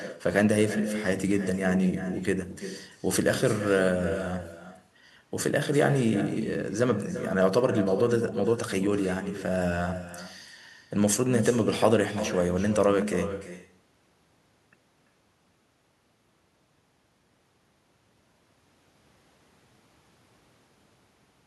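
Echo with no canceller runs throughout: the far end's loudspeaker feeds its microphone, returning the speech about a third of a second later, about 10 dB quieter and thin. Sharp single clicks at 4.16 s and 8.59 s are likely dropped samples, where a tiny fraction of a millisecond vanished and the waveform jumped abruptly.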